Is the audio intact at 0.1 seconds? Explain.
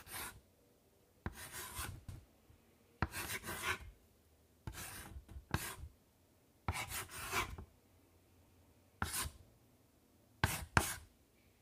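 Yes, at 0.1 seconds the audio is intact, with no dropout, click, distortion or other fault audible at that moment.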